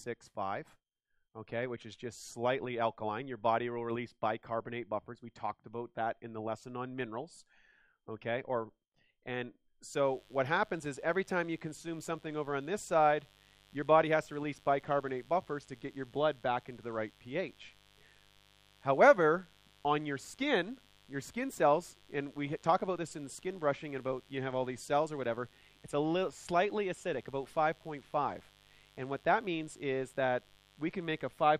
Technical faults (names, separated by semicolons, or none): mains buzz